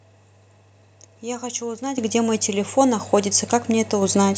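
A microphone volume step-up occurs at 1.98 s. The calling software judged the microphone input too quiet and raised the device's input volume in a single jump of about 10 dB, rather than easing it up gradually. The speech and the background noise behind it become louder together at that instant, so the level change sounds abrupt and mechanical, like a fader being pushed up partway through the sound.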